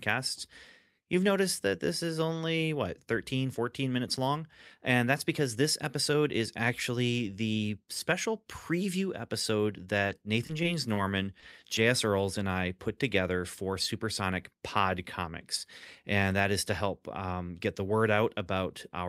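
From 10.07 to 10.98 s there is repeated packet loss, with a robotic sound. Five short holes, none longer than 20 ms, cluster within under a second. Each is patched by extending the preceding sound, so about 9% of that stretch is synthetic and the audio turns choppy with pieces missing. The close spacing is what separates this from isolated dropouts.

Two short concealed packet losses follow, each on its own, at 11.40 to 11.44 s and 11.60 to 11.64 s. About 20 ms went missing each time and was bridged by continuing the last sound before blending back. Each comes across as a single brief smear or wobble, not a sustained robotic texture.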